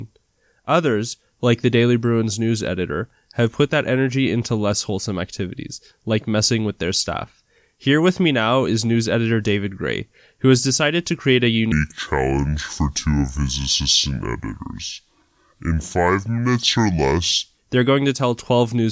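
From 11.72 s to 17.57 s, starting just before "they're going to tell", there is a wrong sample rate fault: playback runs at two-thirds speed, with pitch about 7 semitones lower, so speech sounds slow and deep. This fits 24 kHz audio played at 16 kHz without conversion.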